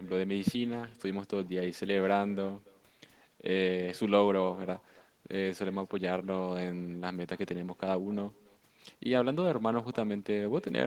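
From start to finish the speech carries an echo with no canceller: the far end's loudspeaker feeds its microphone and nothing subtracts it, so each phrase returns around 300 ms later as a thin copy sitting about 23 dB below the direct speech.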